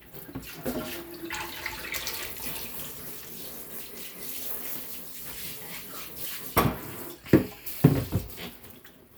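These sounds carry no audible technical faults.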